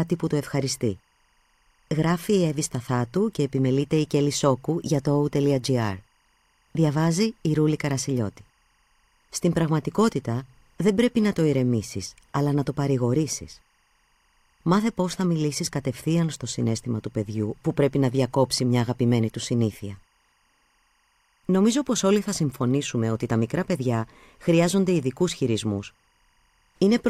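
Timecode bleed runs throughout the speech: a faint chirping warble, far below the voice, flipping between roughly 1 and 2 kHz, its rhythm fitting 24-frame code, unlike a steady single-pitch whine.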